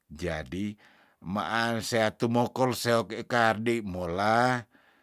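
Nothing in this speech recording stands out as a technical fault, so there's no problem to point to here.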